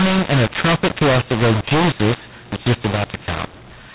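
A short telephone speech recording with a mu-law and A-law mix-up throughout. It was coded with A-law but decoded as mu-law. Levels come out scrambled. The voice sounds harsh and distorted, and the quiet gaps fill with noise. The narrow band, topping out near 4 kHz, fits ordinary G.711 telephone coding.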